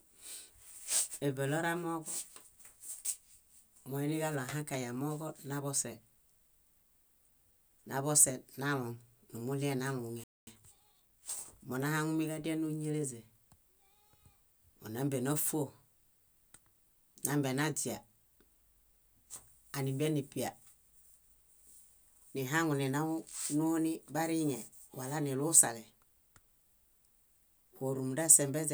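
At 10.24 s the speech cuts off mid-flow and stays silent until 10.47 s, roughly a quarter-second gap. This playback stall likely came from the player running short of buffered data. It appears as a flat, empty band across the spectrogram and a flatlined waveform.

From 10.47 to 11.39 s the player works off its backlog with time-compressed catch-up, running about 1.25 times faster while keeping normal pitch. Small cross-faded cuts give a hurried quality, and the spectrogram shows compressed syllable spacing with unchanged harmonic heights.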